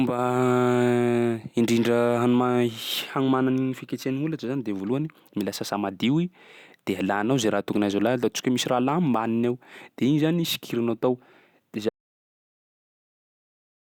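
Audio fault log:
11.89 s to the end, audio dropout to silence: the speech cuts off abruptly mid-flow and never returns, leaving silence with no room tone. That sets it apart from a fade or noise gate, which taper. Likely the input was lost while recording continued.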